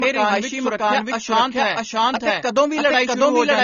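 Throughout the speech, a second copy of the same signal is mixed in, most likely because the audio was captured twice, once through a slower path, or because an edit left two copies out of step. This doubled audio track trails the original by roughly 0.7 s at about the same level. It is full-band and dry, with no decay or room colour, so every syllable is followed by an identical, equally loud repeat, and overlapping phrases blur into each other.

Also running the whole length is low-bitrate audio saved at a high bitrate. The file was likely first squeezed through a low-bitrate codec, with traces that fit an AAC-LC encode near 24 kbit/s, and then re-encoded as MP3 at a much higher rate. The second pass cannot restore anything the first removed. Nothing is present above 6.9 kHz, which leaves the speech dull and muffled, and the artefacts of the original encode remain audible.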